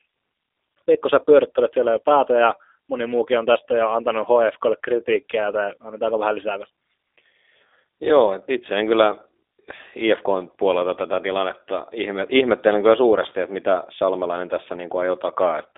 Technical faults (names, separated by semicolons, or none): G.729 codec